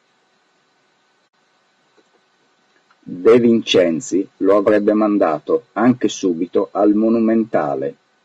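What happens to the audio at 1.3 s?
Around 1.27 to 1.34 s there's AAC frame loss with muting: about 60 ms drops to silence, fading out and back in smoothly, so you hear a soft-edged hole. The gap's length fits roughly three lost frames. The surrounding speech has a rough, grainy texture throughout, likely from low-delay AAC compression at about 32 kbps.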